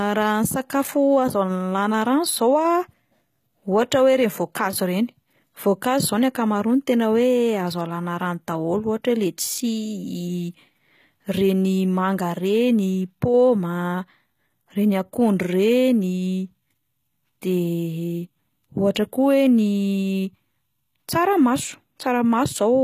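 HE-AAC compression runs through the whole speech clip, likely the cause of its coloured treble. The codec has coded the lower spectrum and synthesised the upper range by copying lower bands upward under a coarse envelope, with nothing above 14.9 kHz. The damage is plainly audible: sibilants come out gritty and lispy, with a metallic sheen where rebuilt harmonics fail to line up with the real ones, which points to a very low bitrate of around 20 kbps.

Pre-echo occurs at 18.95 s, a brief burst of hiss about 10 ms long just ahead of a sharp onset. The transform coder spread its quantisation noise across the whole block, so the noise scaled for the loud attack also filled the quiet instant before it. The onset itself sounds softened and smeared rather than crisp.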